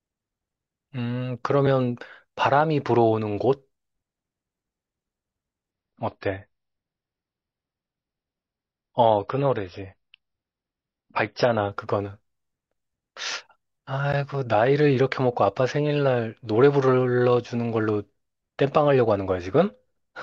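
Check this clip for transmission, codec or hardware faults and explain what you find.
Two kinds of fault are present in this speech clip.

Blocks of digital silence occur at 1.67 s and 14.13 s. The output buffer most likely wasn't filled in time, so the sound cut out with no fade. The first, about 1 ms, is a bare tick. The second, about 12 ms, which fits a 512-sample buffer, is heard as a tick or dip.

An adaptive stream at a lower bitrate runs from 5.71 s to 11.71 s. The stream briefly switched to a much leaner encoding, consistent with a low-bitrate MP3 around 24 kbit/s. For those six seconds nothing above 5.8 kHz remains, so the speech turns dull and smeared, then snaps back without a gap.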